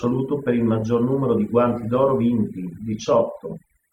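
Across the whole clip the background is pushed down and flecked with twinkling specks. This is overdone noise removal: frequency bands close to the estimated noise level were cut hard, taking quiet parts of the voice with them.

Between 0.78 and 0.83 s, just after "per il" and before "numero di", there is a damaged stretch of about 54 ms. This is a corrupt frame concealed: the decoder detected damaged data and papered over it, a length that fits a couple of frames.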